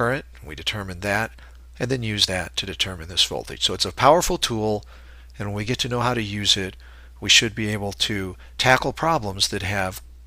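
Nothing stood out on listening to this audio.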